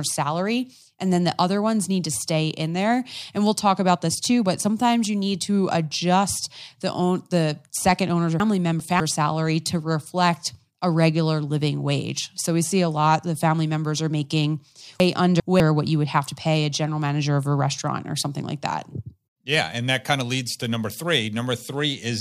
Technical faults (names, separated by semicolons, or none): chunks out of order